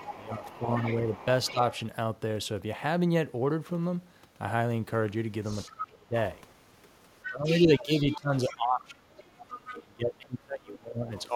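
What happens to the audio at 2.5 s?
Nothing goes wrong at 2.5 s; the speech carries straight through that point with no dropout, click, glitch or other fault.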